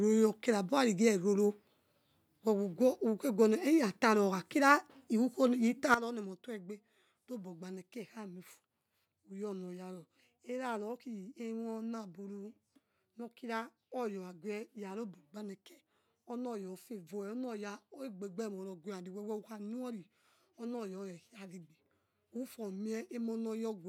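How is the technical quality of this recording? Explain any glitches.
The recording has one clear glitch, a sudden gain jump. At 5.94 s, the speech and its background noise both drop abruptly by about 12 dB together and stay at that lower level until the end. The likely cause is a digital gain change applied from one sample to the next with no ramp, such as a level setting or bit shift taking effect instantly.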